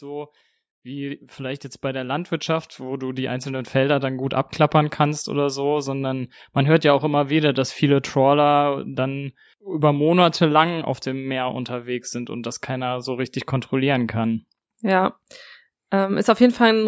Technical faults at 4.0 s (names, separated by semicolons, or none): automatic gain rising